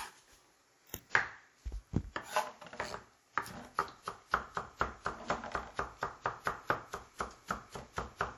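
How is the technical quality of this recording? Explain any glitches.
Plainly audible codec damage throughout degrades the quality. Across the whole clip, the sound rings and washes, with hiss that swells and fades alongside the signal, and nothing above 19.7 kHz. This is likely WMA compression at a low rate, which fits about 48 kbps.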